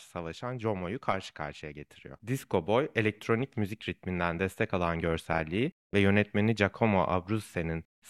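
No technical faults can be heard anywhere in the recording; the speech signal stays continuous and steady throughout.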